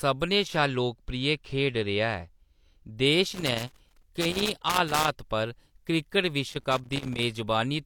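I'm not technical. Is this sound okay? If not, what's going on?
No, there's loose connector crackle in this speech from 3.33 to 5.08 s and again from 6.49 to 7.23 s: a worn or dirty plug contact cutting in and out, causing scratchy bursts.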